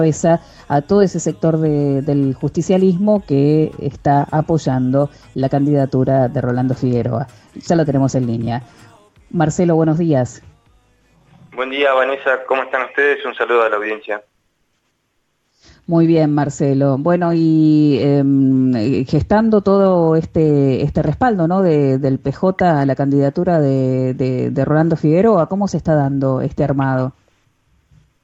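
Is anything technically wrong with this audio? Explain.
No, nothing technically wrong is audible in this recording.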